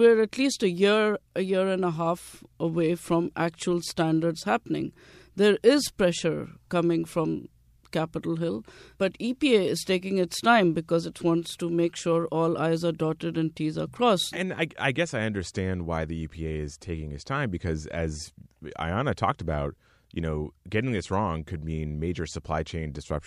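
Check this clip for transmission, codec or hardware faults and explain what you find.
No faults can be heard anywhere in the recording.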